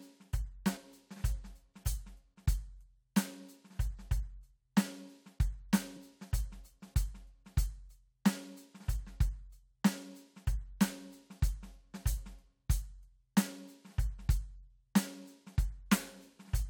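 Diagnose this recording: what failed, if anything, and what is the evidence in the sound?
At 0.76 s and again at 5.96 s the music lurches forward, each jump joined by a short smeared blip, not a sharp click. These are compressed frames skipped at the codec stage. Whole frames were missing or discarded by the decoder as damaged, so playback jumped ahead. The first skip loses roughly 50 ms, which fits about two 23.2 ms frames; the second loses roughly 20 ms, about one frame. The overlap between neighbouring frames blurs each join.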